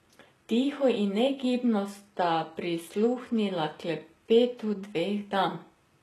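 All the way through, the speech has that shimmery, slightly synthetic top end, with s sounds coming out gritty and a bit lispy and nothing at all above about 12.3 kHz. That's likely HE-AAC compression. The encoder keeps only the lower band and fakes the treble by copying it upward under a rough envelope, so the highs sound bright but don't match the real harmonics. The damage is plainly audible, which fits a very low bitrate, around 16 kbps.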